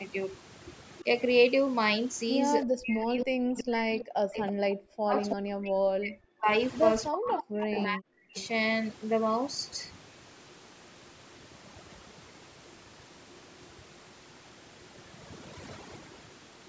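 Overdone noise removal runs through all of the speech. The reducer was set too hard, so the background falls to near silence with twinkling specks. On a spectrogram the gaps between words look almost empty, with scattered isolated dots, and the quiet parts of the harmonics look ragged. The call's microphone processing leaves nothing above 8 kHz.

Echo leak appears at 0.99 to 1.03 s, 3.99 to 4.52 s, 7.38 to 7.83 s and 8.37 to 8.48 s. A copy of the far voice trails it by 319 ms, from about 20 dB down to about 10 dB below the speech, likely because a loudspeaker's echo canceller let it through. The spectrogram shows a weaker, shifted duplicate of the harmonic pattern.

Speech suppressed in double talk affects 2.64 to 6.48 s, for roughly 3 s in total, and 7.1 to 8.37 s, for about 1 s. The voice dips by as much as about 40 dB, likely because the canceller confused it with echo. The waveform shows sudden collapsed stretches, and the spectrogram shows bands that fade to empty.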